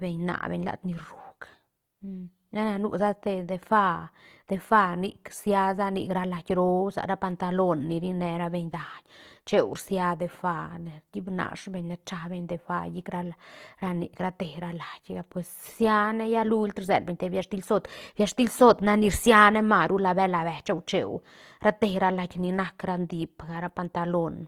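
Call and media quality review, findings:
Throughout, whole clip: speech grainy and rough, noisy, plainly audible. Likely cause Opus compression in CELT music mode at a low rate, consistent with about 24 kbps. Band energies are kept, but starved bands are refilled with folded or noise content. Spectrogram: fullband up to about 20.2 kHz with few holes, upper bands smeared and speckled instead of showing harmonic structure.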